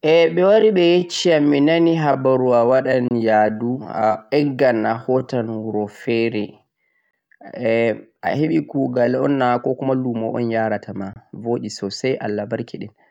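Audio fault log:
0.00–9.21 s: time-stretched section. The speech runs at about 0.69 times its normal pace, then returns to normal speed abruptly at 9.21 s. Pitch does not drop with the slower pace. Syllables sound drawn out. This is likely software stretching the audio to fit a longer length, repeating short slices to fill time while holding pitch steady.
3.08–3.11 s, 7.11–7.13 s, 11.13–11.16 s: gap between chunks. Three short holes of about 25 ms each cut into the speech, spaced about 4 s apart. The steady spacing suggests the audio was handled in 4-second blocks, with silence inserted at every join. Nothing is lost, but each boundary breaks the flow of the speech.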